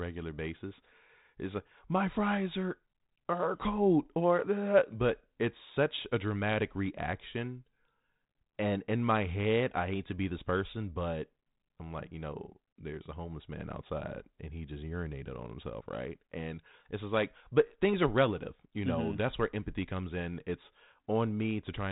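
No technical faults can be heard in this speech, which comes through a 32 kbit/s G.726 telephone path that passes nothing above 3.9 kHz.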